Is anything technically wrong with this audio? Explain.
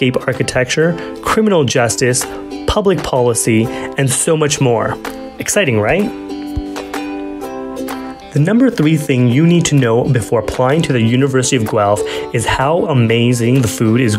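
No, nothing technically wrong can be heard in this audio.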